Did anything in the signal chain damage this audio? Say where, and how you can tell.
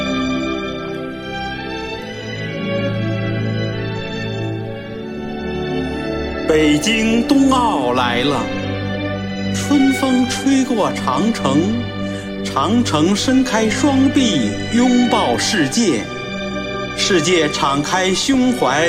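Yes: short noise blips at 0.69–0.92 s and 18.24–18.34 s. This is DAB burbling: weak reception let bit errors corrupt the MP2 audio data, putting short bursts of noise into sub-bands.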